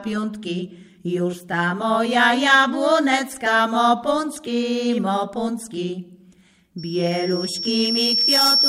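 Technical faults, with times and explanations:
6.78 to 8.68 s, loudspeaker feedback squeal: a single high tone at 5.5 kHz appears and swells over roughly a second and a half into a piercing squeal, ending up about 5 dB above the rest of the sound and carrying on to the end of the clip. It happens because a microphone is picking up the loudspeaker it drives, and at 5.5 kHz the gain around that loop exceeds one, so the tone keeps feeding itself and grows.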